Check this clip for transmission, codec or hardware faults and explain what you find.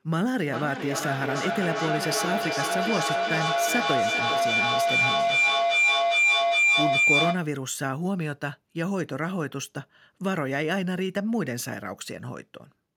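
One fault is present: feedback howl runs from 0.4 s to 7.6 s. Two devices in the same room share the call, so each pass through microphone and loudspeaker adds gain. The repeats swell instead of dying and narrow to a howl near 2 kHz, coming back roughly every 0.4 s and peaking about 6 dB above the speech.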